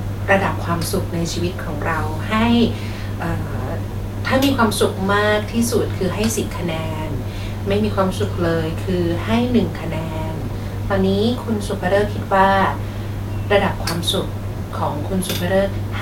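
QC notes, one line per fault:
No faults to note for this speech clip.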